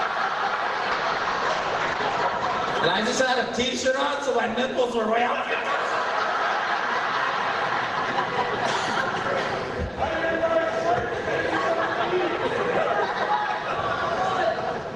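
From 0.94 to 3.57 s, a call bitrate drop makes the sound coarse and muffled, consistent with roughly 32 to 11 kbps. The spectrogram's top edge falls from 20 kHz to 8 kHz.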